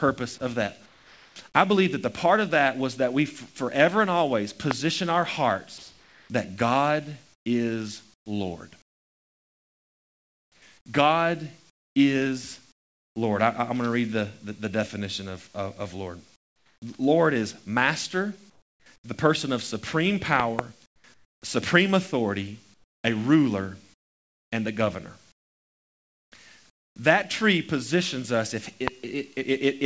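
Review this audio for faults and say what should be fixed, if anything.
Sound chopped by the voice detector, 0.38 to 1.36 s, just before "I believe that the": the sending side's speech detector flicks between transmitting and muting several times in this second, so about 0.52 s of quiet onsets and word edges drops out and is filled with synthetic noise. The speech sounds clipped and stuttering. This is likely an overly aggressive detector threshold or hangover setting. Lowering the detector's sensitivity or lengthening its hangover time, or turning it off, would stop it.

Loud pop at 4.71 to 4.73 s, a double pop at 20.40 to 20.61 s, and another at 28.88 to 28.90 s: each is a sharp transient peaking roughly 20 dB above the speech, riding on top while the sound continues beneath. A step or spike of voltage, likely from a connector, switch, static discharge or driver glitch, enters the chain, and the later stages shape it into a click or thump. 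Securing cables, grounding properly and checking the capture driver would prevent these.

Comfort noise in place of the background at 5.78 to 13.16 s, 16.36 to 16.82 s, 18.50 to 19.04 s, 20.86 to 21.42 s (just before "supreme authority") and 22.74 to 26.96 s (just after it): during pauses the sender stops transmitting and the receiver substitutes generated noise, replacing about 3.3 s, 0.5 s, 0.4 s, 0.5 s and 2.1 s respectively. The real ambience gives way to a smooth, featureless hiss, about 13 dB quieter in the 16.4 s gap, and it jumps back when speech resumes. This is likely discontinuous transmission in the call path. Disabling discontinuous transmission on the sending side would keep the real background through the pauses.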